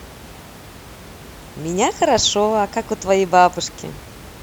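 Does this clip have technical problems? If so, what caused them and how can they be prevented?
No, the speech signal shows no technical problems, and the only other sound is the room's own background noise, sitting about 21 dB below the voice as part of the recording itself.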